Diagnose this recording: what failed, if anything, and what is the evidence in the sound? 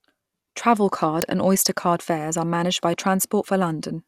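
Uninitialised buffer at 1.22 s, in the driver or buffer stage of this speech recording. A single, extremely brief loud crack cuts across the sound, gone in under a millisecond. Its length, about 0.67 ms, fits a 32-sample buffer. That block was handed to the output before any audio had been written into it, so whatever stale values sat in memory were played out as raw samples.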